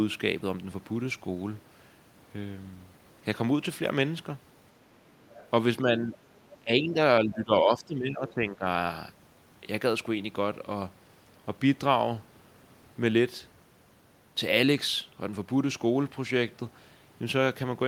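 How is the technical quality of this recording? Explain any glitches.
The recording has two related problems in the middle section, between about 5.2 and 8.7 s, both pointing to a speakerphone-style setup with imperfect echo cancellation.

Other side's voice leaking through: faint scraps of a second voice appear from 5.24 to 5.48 s and again briefly from 8.28 to 8.34 s, sitting roughly 25 dB below the main talker. The far end's audio is being played on a loudspeaker and picked up by the microphone. The canceller is likely not modelling that acoustic path fully, so a residue of the other side passes through underneath.

Speech suppressed in double talk: the talker's level sags in three places: from 5.83 to 6.16 s by a few dB, from 6.6 to 6.99 s by around 15 dB, and from 7.25 to 8.66 s by around 10 dB. The longest stretch overlaps the second leak. With both sides speaking at once, the echo canceller likely could not separate the near talker from the loudspeaker echo and turned everything down. 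The result is audible as the voice ducking.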